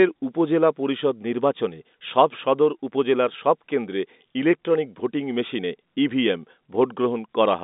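There are no technical faults to describe at any point in the speech.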